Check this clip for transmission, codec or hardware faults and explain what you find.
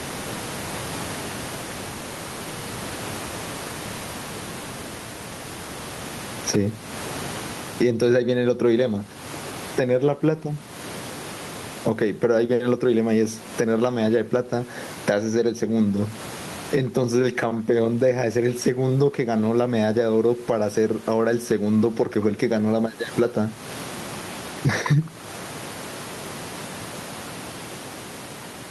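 One fault runs through the whole recording. Gain pumping, present from start to finish: the level is pulled down on every loud sound and recovers after it, with a swing of around 20 dB. The likely cause is input gain set far too high for the microphone, with a fast limiter or compressor clamping down on each loud syllable. The result sounds squashed, with loud and quiet passages pressed close together. There is also room noise, about 34 dB below the speech.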